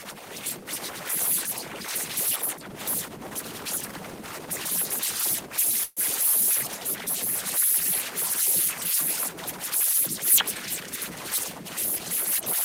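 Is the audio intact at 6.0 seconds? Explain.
No. A call audio freeze runs from 5.83 to 6.00 s and is just ending at 6.0 s. The sound stops advancing, and for about 132 ms the last bit of sound is stretched into a fading buzz or hiss, then goes briefly silent for about 10 ms. This is likely because packets were held up long enough for the jitter buffer to run empty. When they arrive, the sound resumes exactly where it stopped. Unlike a dropout, nothing is lost. The rest of the clip simply lands about 132 ms later.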